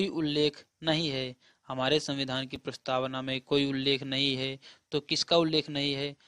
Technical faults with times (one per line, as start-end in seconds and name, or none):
2.55 chunks out of order